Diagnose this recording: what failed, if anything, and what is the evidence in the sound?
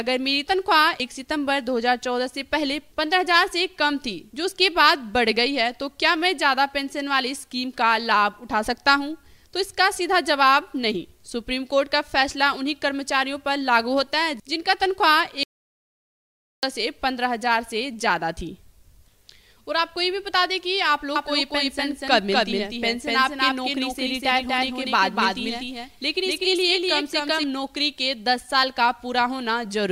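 Audio dropout to silence from 15.43 to 16.63 s, about 1.2 s of dead silence, no room tone. Likely the input link dropped while the recorder kept writing.

Doubled audio track from 21.16 to 27.44 s: a dry full-band copy at roughly equal level trails by around a fifth of a second, starting and stopping abruptly. Likely a second capture path or misaligned edit.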